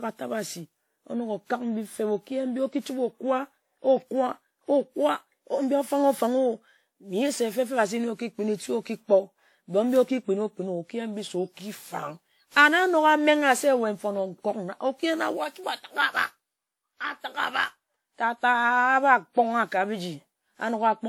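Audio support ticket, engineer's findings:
Whole clip, speech: swirly, smeared, hollow tone, blurred consonant attacks. Generation loss, likely from about ten passes through a WMA 96 kbit/s encoder, each shifting the frame grid and compounding holes. Unlike a single low-bitrate encode: bandwidth still reaches 20 kHz.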